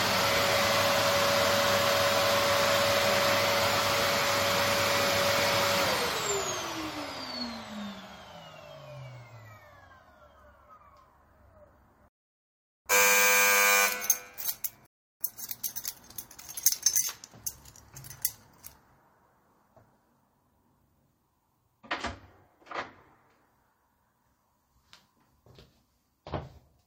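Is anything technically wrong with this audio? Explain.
Yes, there are two rebuffering stalls, at 12.08–12.86 s and 14.86–15.21 s. Playback ran out of downloaded audio, fell silent for about 0.78 s and then 0.34 s, and resumed exactly where it stopped. The waveform shows flat gaps and the spectrogram shows blank columns.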